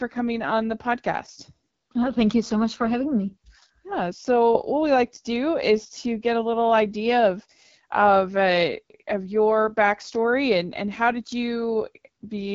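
AMR wideband (HD Voice) codec damage runs throughout this speech clip: at a low bitrate, which fits roughly 8.85 kbit/s, the pulse-driven vocal tract model leaves the speech plainly rough and raspy.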